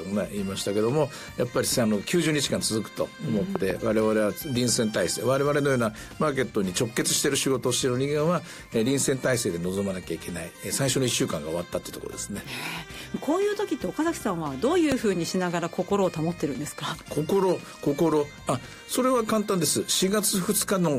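Two loud pops sit on top of the sound, which keeps going underneath both. The first, from 3.56 to 3.73 s, is actually a quick double pop. The second is a single hit from 14.92 to 14.94 s. Each one jumps out at around 15 dB above the surrounding level. That sharp, thumpy character points to a likely voltage spike from a plug, switch, static discharge or driver glitch getting into the signal chain.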